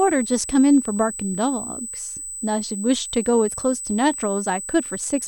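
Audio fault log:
throughout, USB whine: a fixed 8 kHz tone sits under the speech at about -10 dB, the USB bus's 125-microsecond microframe current draw leaking in through power or ground.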